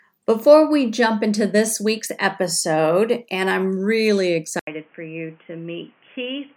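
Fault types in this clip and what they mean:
Input switched to a poorer device: at 4.59 s the sound drops out for 80 ms, then returns noticeably quieter and boxy, with a narrower band and a new noise floor well below it; the recording likely moved to a lower-grade microphone or headset.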